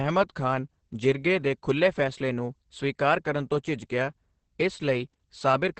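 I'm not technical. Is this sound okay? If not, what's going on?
No. Throughout, the speech sounds muffled, hoarse and slightly robotic. That's heavy Opus voice compression, squeezing the sound so tightly that its crisp top end and fine detail are lost.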